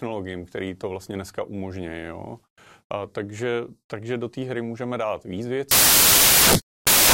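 A speech clip that, from 5.71 s to its end at 7.14 s, just after "hry můžeme dát víc", turns to loud, harsh broadband noise: samples built from the wrong bytes, with the noisy low bits read as the large part of each value. A spectrogram shows broadband fill, the waveform a dense block.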